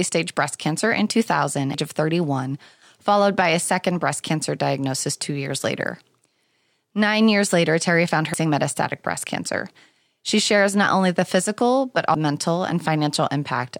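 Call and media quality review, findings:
Damaged data in a compressed stream: faults at 1.74 s, 8.34 s (before "metastatic breast cancer") and 12.15 s (after "not only the physical"). Decoder loses frame sync and searches for the next frame header.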